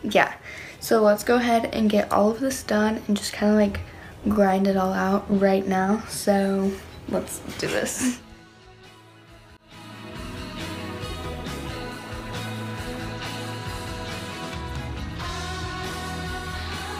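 At 3.88 s and again at 6.83 s, the sound jumps. Each time about ten milliseconds is missing, and the two sides join directly with no gap. The likely cause is a dropped buffer (overrun), where samples were overwritten before being read.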